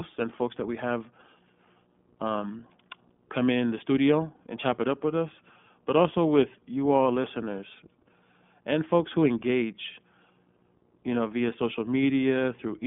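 Throughout, the speech sounds narrow, rough and slightly synthetic, with nothing above 3.7 kHz, the mark of the iLBC codec coding each 20 ms frame independently.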